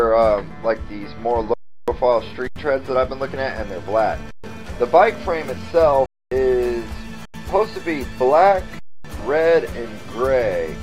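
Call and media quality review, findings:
Sound freezes flat, cuts out without a click, resumes with a click: 1.54–1.88, 2.48–2.56, 4.31–4.44, 6.06–6.32, 7.25–7.34, 8.79–9.05 s. Underrun with held sample: output buffer ran empty, converter held its last value. Roughly 0.1–0.3 s of live audio lost each time.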